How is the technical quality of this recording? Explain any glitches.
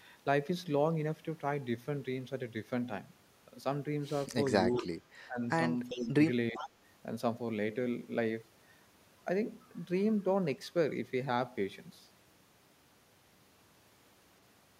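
The speech has two linked glitches, all within about 4.7 to 6.7 seconds.

Speech suppressed in double talk occurs at 4.69–4.89, 5.27–5.41, 5.90–6.18 and 6.52–6.64 s. The voice dips by about 10 to 20 dB. The likely cause is an echo canceller ducking the near talker while the far side also spoke.

Echo leak appears at 4.75–4.85, 5.89–6.08 and 6.54–6.70 s. A faint copy of the voice trails 393 ms behind, about 20 dB down, and about 15 dB down in the last instance. This is likely loudspeaker pickup that the canceller failed to remove.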